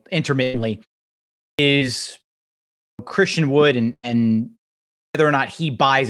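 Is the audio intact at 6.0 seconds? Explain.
Yes, the speech is intact at 6.0 seconds, with no fault at that moment.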